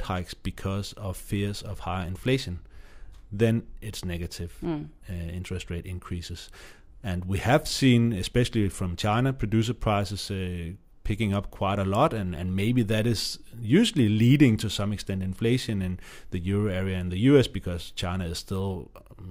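No technical faults can be heard anywhere in this recording.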